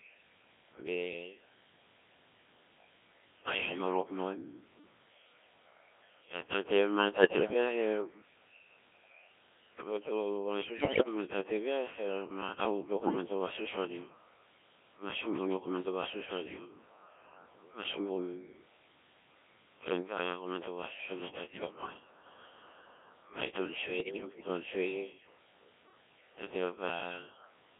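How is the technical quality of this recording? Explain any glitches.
Technical quality is poor. The speech has passed through a very low-rate vocoder for its whole length, and five short bursts of transmission errors break it up further.

Codec 2 vocoder (throughout): The decoder rebuilds speech from pitch, voicing, energy and a coarse spectral envelope rather than keeping the waveform. The result is heavily robotic and buzzy, in a band of about 250 Hz to 3.5 kHz. The damage level fits Codec 2's 1.3 kbit/s mode. A spectrogram shows neat, synthetic-looking harmonic stacks with nothing above 3.5 kHz.

Bit errors on digital voice radio (7.12–7.54 s, 10.80–11.08 s, 13.00–13.16 s, 21.44–21.94 s, 24.00–24.48 s): Corrupted bits are scrambling each affected frame's pitch, level and spectral parameters, with the heaviest corruption around 10.8 s. The voice breaks into warbles, bleeps and gibberish. 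On a spectrogram the harmonics jump abruptly from frame to frame, and the waveform shows erratic level steps.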